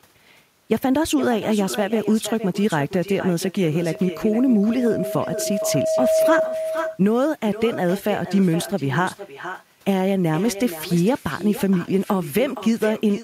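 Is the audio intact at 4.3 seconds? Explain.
No. A loudspeaker feedback squeal runs from 3.78 to 6.55 s, so 4.3 s falls inside it. A microphone is picking up the loudspeaker it feeds, and at 637 Hz the loop gain exceeds one, so that single frequency keeps reinforcing itself. It is heard as a steady tone that swells over about two seconds until it sits at roughly the same loudness as the speech, then stops at 6.55 s.

At 4.3 s the speech also carries echo with no canceller. The far end plays the call over a loudspeaker, its microphone captures that playback, and nothing removes it before it returns. The result is a thinner copy of the speech trailing about half a second behind and about 12 dB quieter. It doubles every syllable with a hollow shadow, stacked here under the rising squeal.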